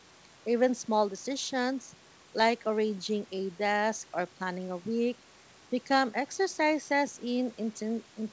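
Nothing goes wrong in this speech recording: it's simply been through a call's microphone processing and a wideband call link, with nothing above about 8 kHz, which fits a codec like G.722.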